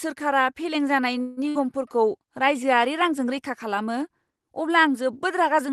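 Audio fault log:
1.21–1.40 s, call audio freeze: right after "फेलें जानाय" the sound stalls, and the last moment is stretched into a fading buzz for about 155 ms. This is likely from delayed packets draining the jitter buffer. Playback resumes where it stopped, so nothing is lost, but the rest arrives 155 ms late.
1.49–1.58 s, burst of packet loss: shortly after "फेलें जानाय", 60 ms of audio is replaced by the receiver extending and fading the preceding sound, then playback jumps ahead. Those 60 ms are missing outright, which points to packets lost or arriving too late, heard through an Opus call path band-limited to 12 kHz.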